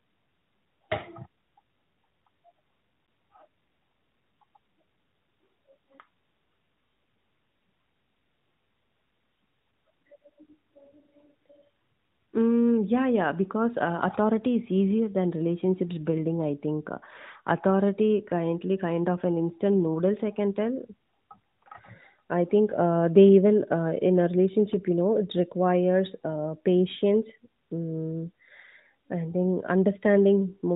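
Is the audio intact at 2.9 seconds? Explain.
Yes, the speech at 2.9 seconds is intact, with nothing there beyond the narrowband character of the AMR-NB mobile codec it was carried through.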